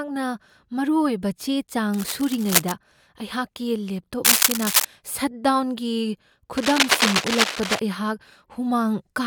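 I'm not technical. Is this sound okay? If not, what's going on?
No. There's cable scratch noise: rough scratchy bursts over the speech from 1.94 to 2.72 s, 4.25 to 4.85 s and 6.57 to 7.81 s, likely from a worn cable or connector being moved.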